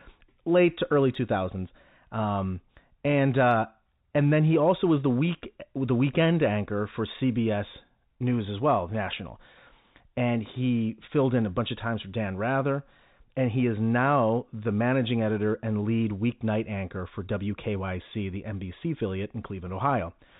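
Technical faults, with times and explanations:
No technical faults detected.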